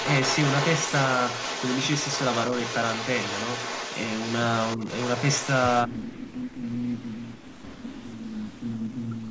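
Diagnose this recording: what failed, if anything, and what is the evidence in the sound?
Echo leak, in the call processing stage: from 0.0 to 5.82 s a delayed copy of the speech trails the direct sound by 205 ms, at about 10 dB below it. It returns briefly at 6.17–6.33 s (about 20 dB down) and at 7.36–7.93 s (about 15 dB down). The likely cause is a far-end echo canceller that left part of its loudspeaker pickup in the microphone signal and sent that residue back.

Speech suppressed in double talk, also in call processing: the speech level dips by roughly 10 dB for about 70 ms between 4.77 and 4.88 s. Between 5.85 and 7.57 s, and again from 7.90 s to the end, it drops by up to roughly 30 dB, about 1.5 s affected in each stretch. The likely cause is an echo canceller that could not separate the local talker from the echo while both sides were active, so it attenuated both.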